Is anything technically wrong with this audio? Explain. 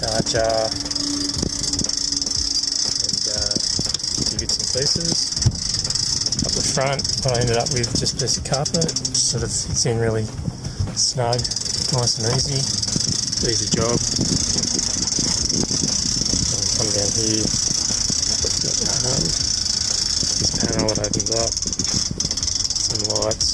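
No, there are no technical faults to hear.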